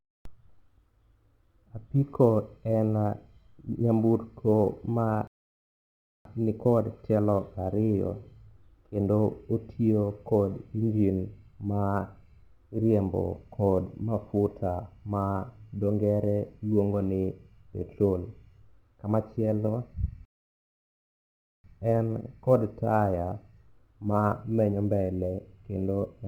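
Speech, with sample clock jitter running through the whole recording: an unstable converter clock, on the order of a few microseconds, shifts each sample slightly in time. This leaves a faint roughness roughly 40 dB below the signal that swells on loud, bright passages and disappears in pauses. On a spectrogram it shows as a diffuse high-frequency haze that follows the energy of the speech. There are also two rebuffering stalls, from 5.27 to 6.25 s and from 20.25 to 21.64 s, where playback ran dry and halted. Each adds silence, about 0.98 s and 1.39 s respectively, before the audio picks up exactly where it stopped, and the waveform shows a flat gap with no content missing.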